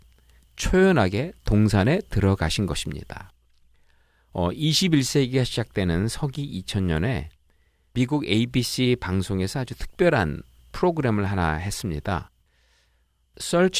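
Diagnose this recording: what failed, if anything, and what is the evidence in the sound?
Nothing in this speech recording points to a failure at any stage, from the analogue wiring and converter through to storage and playback. There is no event anywhere in the sound that a listener could tie to a broken link in the chain.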